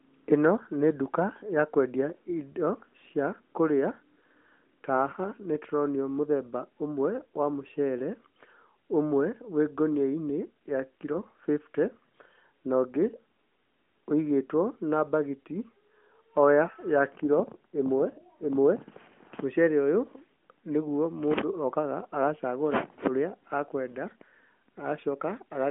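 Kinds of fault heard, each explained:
No kinds of fault are heard in this speech.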